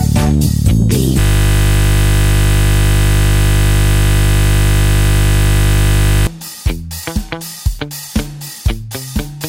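From 1.20 s to 6.27 s the audio freezes into a system hang loop: one 20 ms fragment repeats 254 times, producing a steady 50 Hz buzz while the hardware recycles its buffer.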